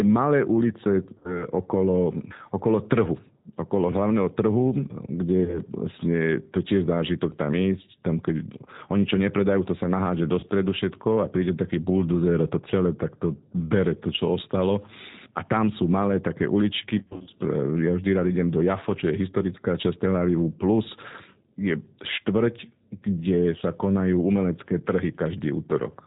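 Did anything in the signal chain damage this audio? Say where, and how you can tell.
Yes. At the codec stage, G.729 coding at 8 kbit/s leaves the speech band-limited below 4 kHz, plainly rough and synthetic throughout, from pulse-based excitation rebuilding each frame.

On the network, packet loss concealed by the speech codec appears at 1.18–1.47, 5.44–5.59, 10.40–10.47 and 16.99–17.30 s: fading extrapolations where the decoder repeated its last pitch and filter.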